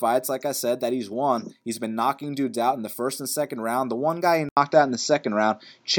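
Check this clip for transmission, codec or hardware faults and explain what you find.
One fault is present. Input switched to a poorer device, from 4.49 s to the end, just after "one guy he". After an 80 ms gap, nothing above 7.6 kHz remains, the level shifts about 5 dB, and a new noise floor appears roughly 45 dB down, likely because capture moved to a narrower-band microphone.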